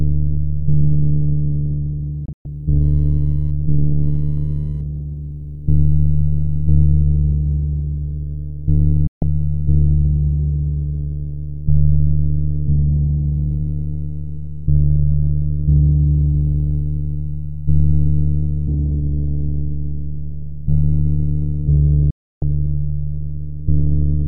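At 2.26 s a digital broadcast dropout mutes the sound in short holes for about 144 ms. Bad frames made the receiver cut out. From 2.81 to 4.81 s, faint computer activity noise chirps around 1 kHz. Further dropouts hit at 9.07 s and 22.10 s.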